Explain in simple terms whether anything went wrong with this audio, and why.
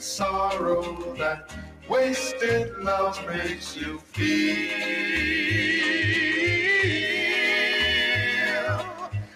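Several things went wrong, and they are easy to tell apart by what they do to the sound.

Throughout the clip, a noise suppressor designed for speech was left switched on, and it treats sustained tones, room ambience and reverb as unwanted noise. Sharp starts get through, but held sounds and tails keep being pushed down a little, so the level gently pumps rather than staying steady.

In three places, from 0.92 to 1.91 s, from 3.55 to 4.17 s, and from 8.83 s to the end, the sound is cut by the noise suppressor much more heavily. Sustained or fading parts drop clearly and their tails are chopped short. The sound gets quieter without getting rough, which separates it from the next fault.

From 5.62 to 7.04 s there is a Bluetooth SBC bit pool drop. A busy wireless link forced the phone to squeeze the audio harder, so the treble goes dull and a gritty, grainy texture appears. The roughness clears once the link recovers.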